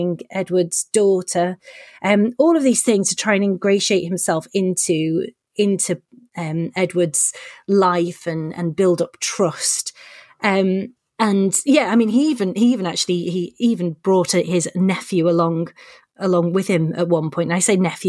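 No technical faults can be heard at any point in the recording.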